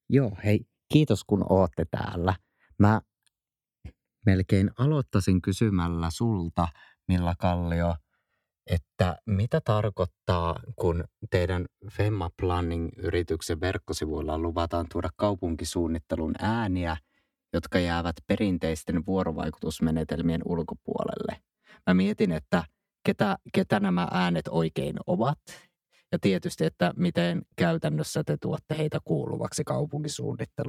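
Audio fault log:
Throughout, channels drifting apart: clocks roughly 200 ppm apart let the inter-channel delay creep to around 7 ms, so mono notches sweep slowly, unlike fixed comb filtering.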